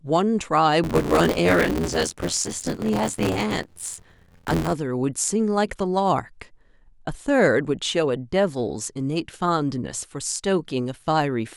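From 0.84 to 4.73 s, buffer tearing: writer and reader slipped, splicing roughly half of each period with audio about 20 ms old, causing an 86.1 Hz robotic buzz, which fits a 512-sample buffer.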